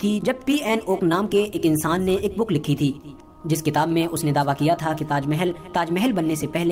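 There's a click repeating about every 1.05 s from 0.27 s to 6.56 s, around seven of them. These are clock drift buffer slips, most likely two devices whose clocks differ by roughly 150 ppm, so the buffer periodically drops or repeats a handful of samples.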